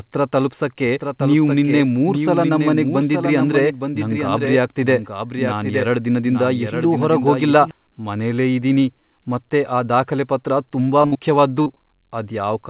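From 0.87 s to 7.71 s the speech carries a doubled audio track. A second full-band copy trails the original by roughly one second at about 5 dB lower, so each phrase returns as a dry, clean echo with no room colour or decay. It most likely comes from a second capture path running behind the first. The copy cuts in and out abruptly at those bounds, and the doubling has stopped just before "ಮನೆಲೇ ಇದೀನಿ ಮತ್ತೆ ಆ".

Late in the clip the call shows short concealed packet loss at 11.02 s, 11.14 s, 11.63 s and 11.74 s. Each is a gap of 20 to 40 ms that never reached the decoder in time and was bridged by extending the preceding sound before crossfading back. They are heard as brief smears or wobbles, and the 11.63 s fill lasts 30 ms. The call runs over narrow-band G.711 A-law, with nothing above 4 kHz.

Between 11.06 s and 11.14 s there is a burst of packet loss. About 60 ms went missing in a row, and the receiver carried the last sound forward while letting it fade, so it comes through as a held, decaying buzz or hiss. 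Speech then resumes further along with that stretch gone. Together with the losses either side, it makes 11.02 to 11.17 s one continuous disturbed patch.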